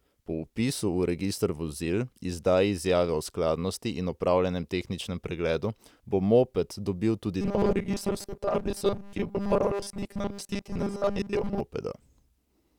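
From 7.41 s to 11.60 s, just after "bo moped dobil tudi", the speech becomes a rigid, metallic 200 Hz buzz that loosely follows the words. This is robotic sound from repeated short buffers, likely a 5 ms chunk replayed over most of the real audio.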